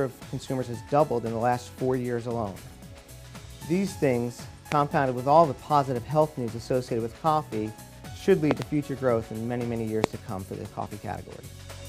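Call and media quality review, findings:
Loud pops at 4.72 s, a double pop 8.51–8.64 s, and 10.04 s, about 20–25 dB above the signal. Likely a voltage spike from a switch, plug or static. Waveform: sharp spikes. Spectrogram: thin full-band vertical lines.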